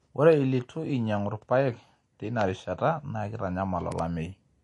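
Throughout the speech, nothing reaches above 11.3 kHz, and the sound has a watery, swirling quality, with metallic chirps on the s sounds and smeared attacks. This is likely MP3 compression, starved enough of bits to suggest a low bitrate near 48 kbps.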